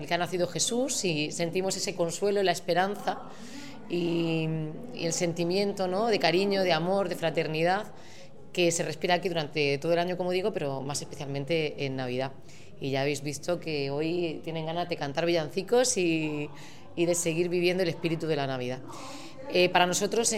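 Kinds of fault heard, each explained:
Dropped samples: two sharp single clicks at 2.14 s and 9.94 s, each a thin vertical spectrogram line, likely from a fraction of a millisecond missing where the waveform jumps.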